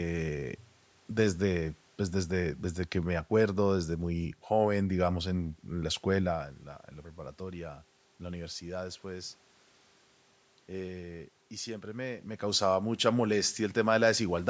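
No technical faults are audible.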